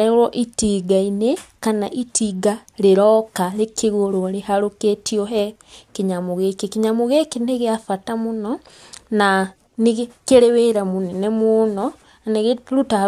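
Speech recording with no technical faults found.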